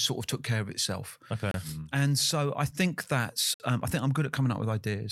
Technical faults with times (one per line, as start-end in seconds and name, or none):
1.51-1.54 gap between stream segments
3.54-3.60 gap between stream segments